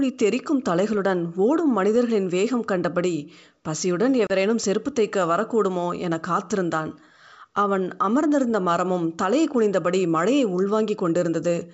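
At 4.27 s, the speech drops into a hard-edged 30 ms hole, ending near 4.31 s. This is packet loss on an ADPCM call, with a few packets lost. The decoder's predictor and step size drift from the sender's. Speech returns slightly distorted, then settles. The surrounding wideband sound fits G.722 at 64 kbit/s.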